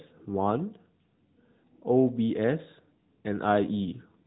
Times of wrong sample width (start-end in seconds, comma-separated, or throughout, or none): none